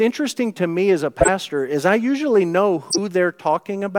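Corrupt frame decoded in this speech at 1.21–1.29 s, after "to me as a", and 2.89–2.99 s, after "is I usually know": damaged compressed frames were decoded anyway, throwing energy to wrong frequencies as brief bursts.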